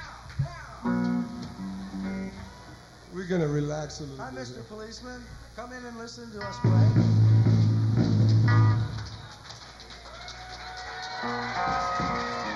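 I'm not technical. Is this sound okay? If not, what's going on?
No. It sounds hollow and phasey throughout. That's channel delay (comb filtering): one side lags a fraction of a millisecond, so when the two are combined, tones near 3 kHz cancel.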